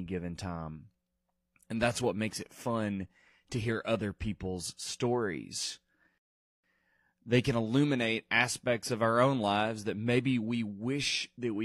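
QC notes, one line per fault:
6.18 to 6.64 s, rebuffering stall: right after "hear other people's stories" the speech cuts to silence for about 0.46 s, then picks up at exactly the point where it stopped. The player used up its downloaded audio and paused until more data arrived, so nothing is lost and the clip simply runs longer. A dropout, by contrast, would skip material and leave a gap in the speech itself.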